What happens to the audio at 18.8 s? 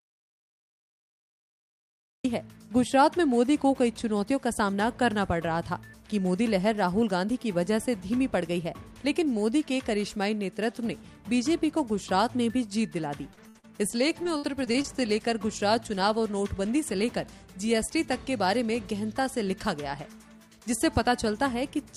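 Nothing goes wrong at 18.8 s; the audio there plays through intact, with no dropout, click, distortion or other fault.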